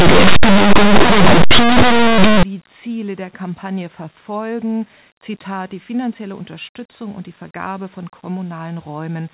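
From the start to 2.43 s the speech carries very loud, harsh distortion. This is linear audio read as companded: plain 8-bit linear samples were decoded as mu-law codes, so values just to one side of zero jump to the largest outputs while those on the other side stay tiny. After 2.43 s the decoding is right.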